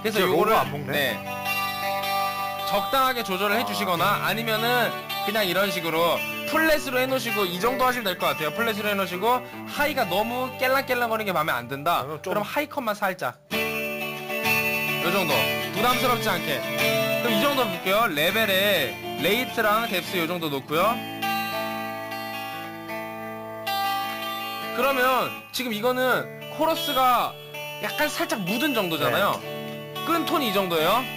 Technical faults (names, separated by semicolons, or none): imaging from sample-and-hold upsampling